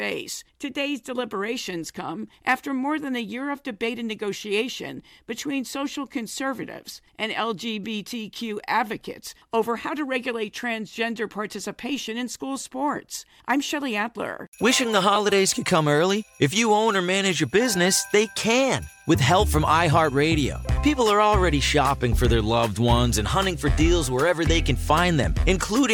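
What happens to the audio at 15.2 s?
A lost LE Audio frame at 15.15 s leaves a gap of about 7.5 ms, which fits a single LC3 frame. The decoder fills it by reusing the previous spectrum with randomised signs, so any tonal content briefly turns into a short, noisy smear.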